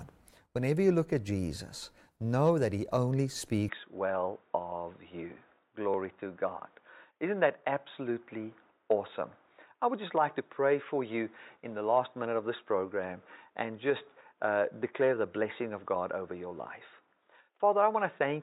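At 3.69 s the recording's input was likely switched to a poorer device, and it stays there to the end of the speech. The new path passes nothing above about 3.8 kHz, so the voice abruptly loses its upper range and turns dull and boxy. The change happens with no gap and no real jump in level, and a faint new background noise sits far below the speech.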